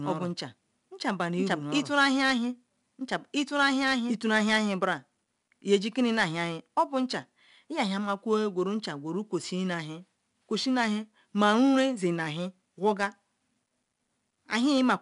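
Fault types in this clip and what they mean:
4-bit ADPCM compression: Each sample is stored as a coarse 4-bit step, so a gritty hiss rides on every loud sound throughout, and nothing comes through above 10.7 kHz.
Doubled audio track: A second full-band copy about as loud as the original trails roughly a second and a half behind, already running at the start and cutting off abruptly at 4.16 s, likely from a second capture path.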